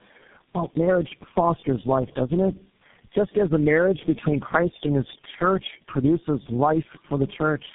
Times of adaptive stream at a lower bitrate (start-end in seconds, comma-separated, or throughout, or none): none